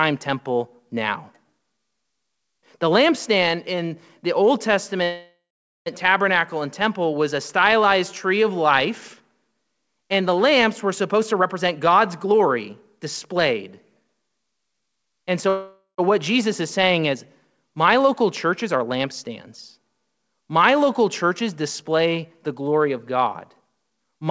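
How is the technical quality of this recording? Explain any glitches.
The speech has two kinds of glitch, heard over a band that stops at 8 kHz, which fits a wideband call codec such as G.722.

A call audio freeze occurs at 5.04 to 5.89 s and 15.49 to 16.01 s. Each begins with a fading buzz or hiss, likely because delayed packets emptied the jitter buffer. The waveform then goes flat for about 0.46 s and 0.12 s, and speech resumes with nothing missing.

Jitter buffer speed-up runs at 11.14 to 13.57 s (116%), 14.02 to 15.46 s (110%) and 22.94 to 24.28 s (108%). Trimmed pitch periods make the speech sound hurried at unchanged pitch, and the spectrogram shows compressed syllables.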